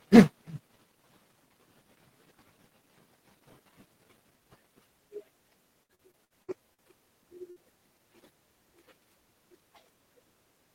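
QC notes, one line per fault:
5.83–6.82 s, repeated packet loss (robotic sound): The speech turns choppy and robotic, with short held tones standing in for pieces that never arrive. Six separate gaps hit this second of audio, the longest 61 ms. Each was patched by stretching the last received sound, so about 29% of the stretch (roughly 287 ms) is repeated filler rather than real signal. The gaps come close together, so the repeats stack up into the robotic quality, and about 180 ms of speech is lost.
7.51–7.59 s, burst of packet loss: A brief held buzz or fading hiss appears, and the speech then jumps ahead with part of it missing. A short run of packets was lost or arrived too late to play. The receiver filled the hole by continuing the last sound for about 53 ms and turning it down as it went, which produces that frozen, decaying tone. When audio resumes, about 60 ms of speech has been skipped.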